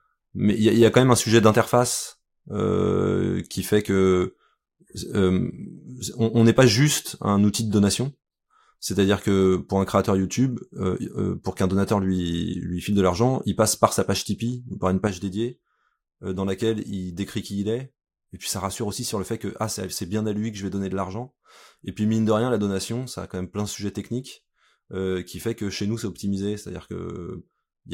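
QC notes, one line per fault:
15.07 s to end, sudden gain jump: just after "ou par une", the level drops by about 7 dB from one sample to the next and stays down for the rest of the clip. The speech and the background noise fall together, which points to a change in digital gain rather than anything at the source. The cause is likely a gain setting or bit shift applied instantly with no ramp, so the step lands as an abrupt, audible discontinuity.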